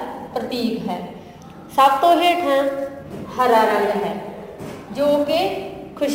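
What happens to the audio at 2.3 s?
At 2.3 s the sound carries sample clock jitter, present across the whole clip. The converter's timing wobbles by around 10 µs, so steep parts of the waveform are misplaced, adding roughness roughly 25 dB below the signal. Unlike a steady noise floor, this hiss swells with loud, bright passages and disappears in silence.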